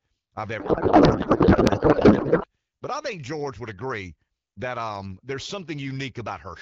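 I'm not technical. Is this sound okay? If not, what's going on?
No. From about 0.59 to 2.46 seconds the speech turns into garbled noise and a wobbly warble that barely follows what's being said, then clears up. This is a codec payload misread. The phone system squeezes speech into small packets, and here the receiving end unpacked them using the wrong layout, so it read the pieces out of order. The pattern fits an AMR wideband call whose packets were laid out one way and read another way.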